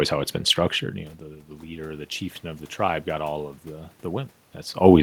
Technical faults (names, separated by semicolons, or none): automatic gain rising